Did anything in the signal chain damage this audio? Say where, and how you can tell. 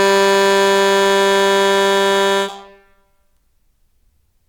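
No, nothing in the signal chain audibly damaged this music. I hear no stage where the audio was degraded, at any point in the clip.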